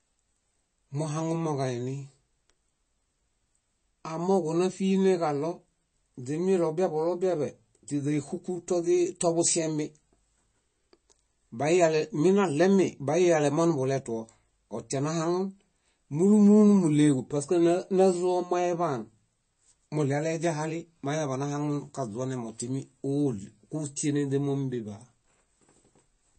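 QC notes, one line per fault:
throughout: MP3 compression. The speech has a watery, swirling quality, with nothing above about 8.3 kHz, so s sounds come out dull and chirpy and consonant attacks smear. The damage is plainly audible and is likely from low-bitrate MP3 encoding, consistent with a rate around 32 kbps. With so few bits, the encoder cuts the treble at a fixed point and zeroes weak frequency lines, which flicker on and off between frames.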